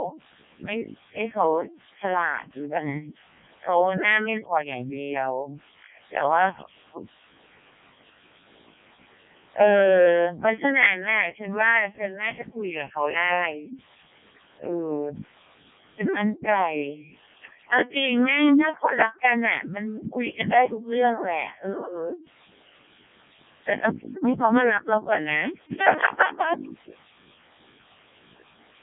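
Robotic, buzzy speech runs through the whole clip, with the voice rebuilt rather than reproduced and nothing above 3.5 kHz. It is a Codec 2 vocoder: only pitch, voicing, energy and a spectral envelope survive, resynthesised from sine waves, and the heavy damage points to its lowest 0.7 kbit/s mode.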